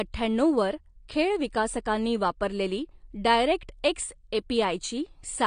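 Throughout, the speech sounds dull and smeared, with nothing above 9.6 kHz, likely from AAC compression at a low bitrate, near 32 kbps, which pulls the cut-off down.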